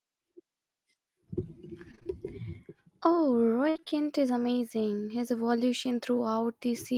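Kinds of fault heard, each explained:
Repeated packet loss (robotic sound): the speech stream lost or received late packet after packet over short stretches, and each hole was patched by stretching out the previous bit of sound. That gives a choppy sound with pieces missing. Around 1.91 to 2.07 s, four quick dropouts mean roughly half that stretch is patched sound. From 3.69 to 3.93 s, just before "is amazing", five dropouts, the longest about 57 ms, leave a little over half of it synthetic.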